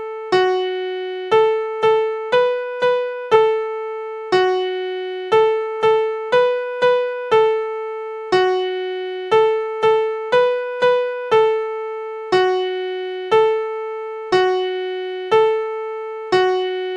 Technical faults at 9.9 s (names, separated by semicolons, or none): none